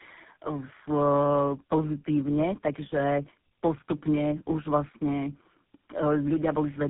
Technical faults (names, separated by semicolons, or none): tandem speech coding